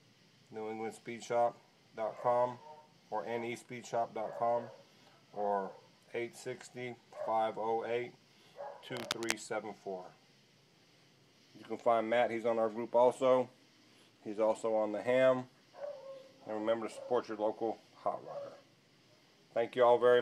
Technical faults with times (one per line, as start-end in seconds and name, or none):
8.95-9.33 cable scratch noise